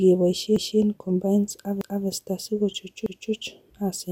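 At 0.56, 1.81 and 3.06 s you get a stutter from overlapping chunks: the audio was handled in 1 s blocks that each restart 250 ms early, so a quarter-second of sound replays at each join, every 1.25 s.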